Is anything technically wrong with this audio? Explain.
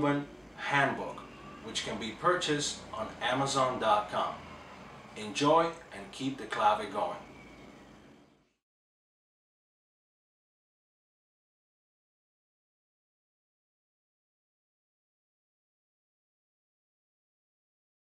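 No technical faults are audible.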